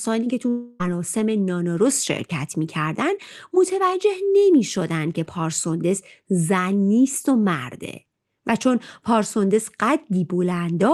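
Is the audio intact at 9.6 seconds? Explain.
Yes, the speech at 9.6 seconds is intact, with no fault at that moment.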